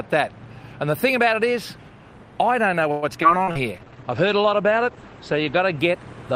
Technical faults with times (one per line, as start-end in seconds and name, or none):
2.91-3.58 repeated packet loss (robotic sound)
3.37-3.90 jitter buffer slow-down
3.78-5.85 call bitrate drop